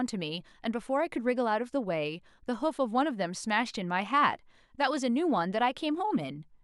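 Listening to this speech recording, nothing technical stood out as a problem at any point.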